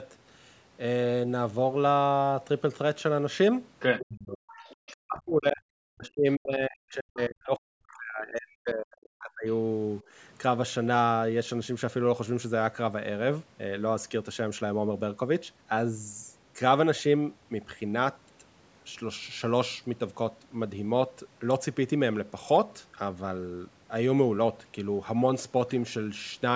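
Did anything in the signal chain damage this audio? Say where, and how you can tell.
Yes, and it all sits in the call processing. You get brief bursts of the other side's voice leaking through: a tiny scrap from 3.99 to 4.03 s at about 15 dB under the talker, then a longer, fainter stretch from 4.54 to 4.92 s at about 25 dB down. That's likely the far end's voice playing on the talker's loudspeaker, getting back into the mic and slipping past an echo canceller that didn't fully converge.

The bigger problem is speech suppressed in double talk. The talker's level collapses by as much as roughly 40 dB from 4.01 to 4.5 s, again from 4.92 to 5.65 s, and for a long stretch from 5.83 to 9.47 s, so whole chunks go ducked or chopped. The canceller's double-talk detection likely couldn't tell the near-end voice from the echo while both sides were active, so the suppressor clamped down on everything instead of only the echo.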